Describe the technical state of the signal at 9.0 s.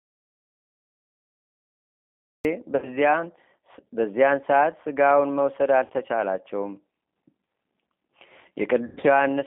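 Packets went missing between 8.87 and 9.04 s, roughly 120 ms of audio across a 160 ms stretch, with one gap lasting 100 ms, which fits about six 20 ms packets. The decoder's VoIP packet loss concealment stretched the last pitch and filter with falling gain, so at 9.0 s the speech becomes a buzzy tone or coloured noise that fades, rather than real speech.

Underneath, the G.729 codec (the G.729A variant) is running at 8 kbit/s. It rebuilds speech from a vocal-tract filter, a pitch predictor and a few pulses per frame, inside a 200 Hz to 3.6 kHz band. The result is plainly rough and synthetic speech with no content above 3.6 kHz.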